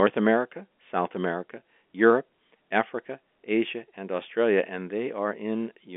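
Nothing goes wrong anywhere in this speech; it simply sits in the narrow telephone band of G.711 A-law coding, roughly 250 Hz to 3.5 kHz with nothing above about 3.7 kHz, which is just how that line normally sounds.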